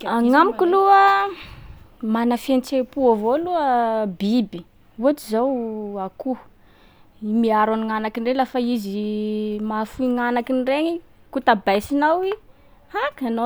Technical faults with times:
none

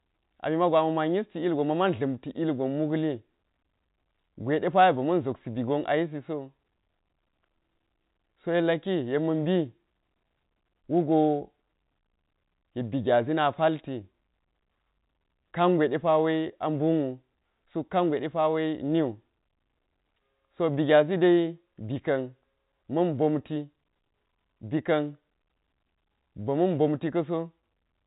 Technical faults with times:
none

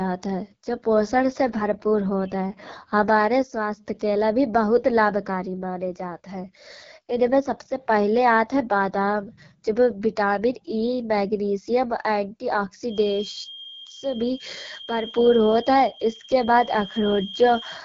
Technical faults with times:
0.00-17.84 AMR wideband (HD Voice) codec
12.83-17.84 feedback whistle

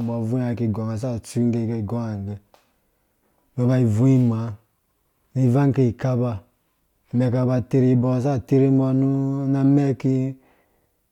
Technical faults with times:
none

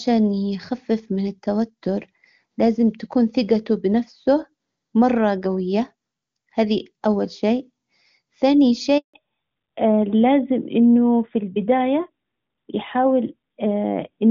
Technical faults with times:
8.98-9.14 handover gap
9.14-14.30 fallback to narrowband

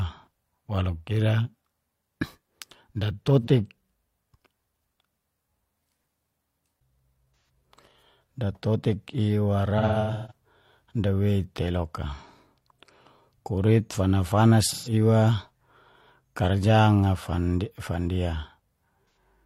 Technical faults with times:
3.42-3.48 AAC frame loss with concealment
7.45-7.49 AAC frame loss with concealment
9.78-10.32 AAC frame loss with concealment
14.70-14.93 AAC frame loss with concealment
19.10-19.17 AAC frame loss with concealment

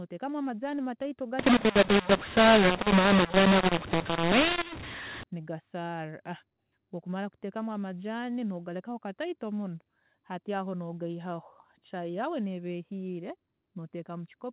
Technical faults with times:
1.39-5.23 mu-law and A-law mixed up

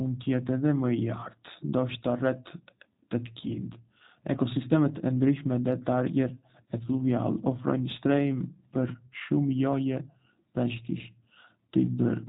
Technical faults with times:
0.00-12.29 G.729 codec

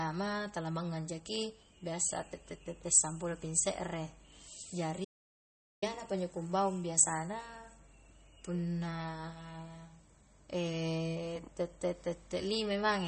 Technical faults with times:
0.00-13.07 MP3 compression
5.05-5.82 audio dropout to silence

